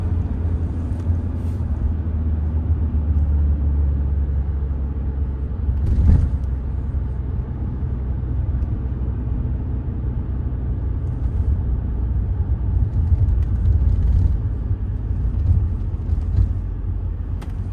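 Nothing goes wrong anywhere in this one; there's simply no technical fault to point to at any moment.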